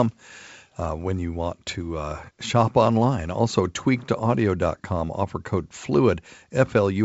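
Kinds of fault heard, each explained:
No faults can be heard in this speech, which comes through a wideband telephone path consistent with G.722 coding, with a faint hiss typical of the coding in the upper band.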